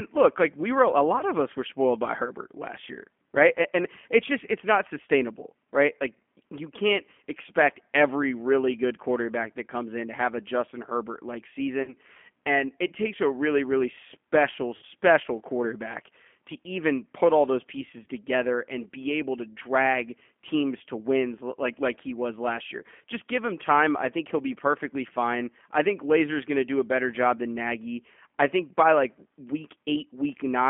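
The whole clip goes through the G.729 codec, band-limited to about 200 Hz to 3.4 kHz, and its rough, slightly synthetic texture fits an 8 kbit/s line. VoIP packet loss concealed by the speech codec hits at 1.19, 11.83, 14.76 and 18.03 s, with gaps of 20, 50, 60 and 30 ms. Each time, the decoder stretches its last frame into a fading buzzy tone or coloured noise, and the sound stays thin for a moment afterwards.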